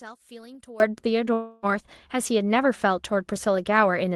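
From the start to 0.8 s, the speech is about 21 dB quieter than the rest of the clip. What remains is faint. This is likely one channel inverted. One stereo channel has its polarity flipped. When the two channels are summed, the content they share cancels. Only the small difference between them survives. After 0.8 s, the full level returns.

From 1.33 s to 1.66 s, there is a long network dropout, likely caused by audio packets that never arrived. About 0.3 s of speech is missing. The receiver covers almost all of the gap, about 0.29 s, by stretching the last sound it had into a fading buzz or hiss. The gap never falls to silence. The speech then resumes without the lost part.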